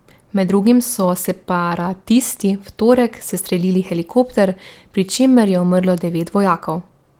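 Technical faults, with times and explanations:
No technical faults can be heard anywhere in the speech. The Opus voice compression at 20 kbps in hybrid mode keeps the full audio band, and the coding leaves only light traces on the sound.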